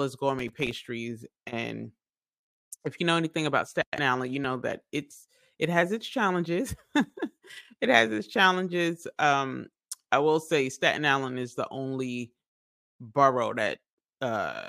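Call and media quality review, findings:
Processor overload crackle, 0.39–0.86 s and 6.86–7.17 s. Gritty crackle burst over the sound. Probable component: host audio processing thread. Missed deadlines on very short buffers, around 1.5 ms each. Each miss is dropped to silence, with about twenty hard-edged gaps in the first burst and several in the second.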